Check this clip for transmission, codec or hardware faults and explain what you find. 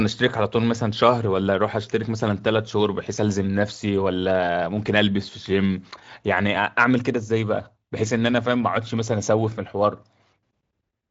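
Nothing here points to any kind of fault; I listened the whole way through and there's simply nothing to flag.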